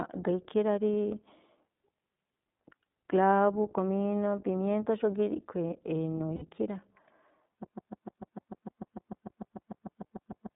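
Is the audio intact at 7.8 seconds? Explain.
No. A broken-record loop runs from 7.64 s to the end: a 149 ms fragment repeats about 20 times, likely from a stalled stream, forming identical repeating blocks on the waveform. The whole clip also carries iLBC codec damage, audible as rough, synthetic speech from independently coded 20 ms frames; the spectrogram shows nothing below 150 Hz or above 3.7 kHz.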